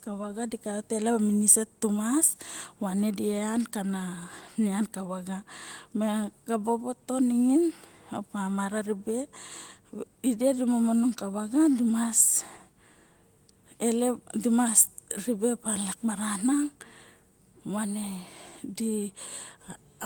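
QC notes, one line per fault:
No faults are heard in this speech clip. The Opus voice compression keeps the full band up to about 20.1 kHz with only light coding damage, consistent with hybrid mode at around 24 kbps.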